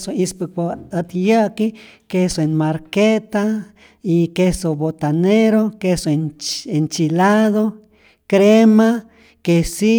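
No technical faults can be heard anywhere in the speech.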